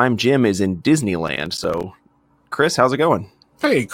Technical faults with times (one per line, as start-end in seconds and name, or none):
1.28-1.84 processor overload crackle